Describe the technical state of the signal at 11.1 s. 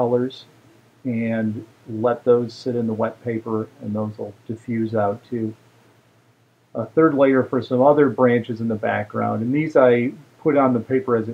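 At 11.1 s the signal runs cleanly, with no audible fault at that point.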